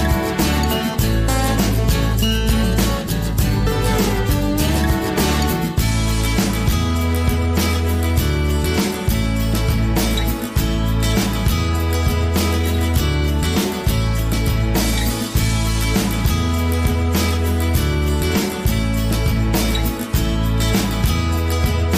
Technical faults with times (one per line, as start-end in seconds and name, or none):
none